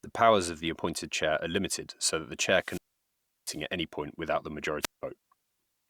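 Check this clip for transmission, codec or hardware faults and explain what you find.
Two wireless microphone squelch dropouts cut into the speech. After "limited so that the", from 2.56 to 3.64 s, hiss swells briefly, then the sound falls into a hole of near silence for about 0.70 s before returning at "at any point without". After "any point without the", from 4.81 to 5.03 s, a shorter hole of about 0.18 s follows. In each, the FM radio link faded until the receiver's squelch muted its output, leaving silence until the signal recovered.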